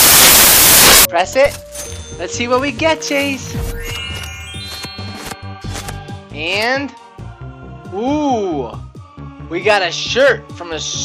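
From 0 to 1.05 s, samples built from the wrong bytes turn low bits into loud broadband noise: full-band spectrogram haze, large, dense waveform.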